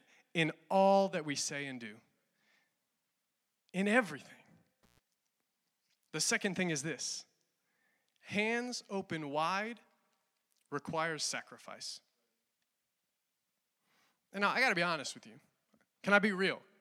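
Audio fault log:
4.83–4.99 s, intermittent contact: a loose plug or cable connection in the signal path briefly lost contact and broke the circuit for about 123 ms before the metal surfaces met again. While the line was open the speech dropped out or broke up, leaving faint hiss from the rest of the chain. The unsteady making and breaking of contact at each end of the gap produced a burst of crackle as the signal cut out and again as it returned.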